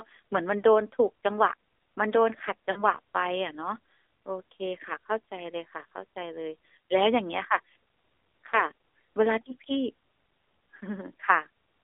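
From start to finish the speech carries the AMR narrowband mobile codec sound. Everything sits between about 300 Hz and 3.6 kHz, with nothing above 4 kHz, and the voice is plainly buzzy and synthetic, which fits a low mode of around 7.4 kbps. On a spectrogram the energy stops at a hard ceiling and the harmonics look smeared and blocky. The waveform looks normal in level but loses fine detail.

At 2.72 to 2.84 s come lost AMR speech frames. What sounds like two dropped frames made the decoder keep repeating its last pitch and vocal tract settings with falling gain, so the sound stretches briefly and sags. The waveform envelope dips, and the spectrogram shows a short, smoothed band with frozen harmonics.

A single lost frame at 8.50 to 8.65 s gives a brief dip or warble, seen as a small notch in level.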